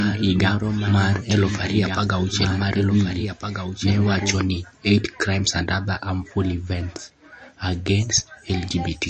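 Speech throughout carries plainly audible MP3 compression damage: watery, swirly sibilants and smeared consonant onsets, with nothing above 8.3 kHz. A spectrogram shows a hard ceiling there and flickering holes in the upper bands, pointing to a low bitrate around 35 kbps as the likely cause. From the start to 4.36 s there is a doubled audio track, already running when the clip opens: a full-band copy roughly 5 dB quieter trails the speech by about one and a half seconds. It has no reverberant tail, and it stops abruptly at 4.36 s. The waveform shows the same shapes repeating at that offset, and the spectrogram shows a duplicate pattern that ends cleanly, likely from a second, slower capture path or an edit that left two copies out of step.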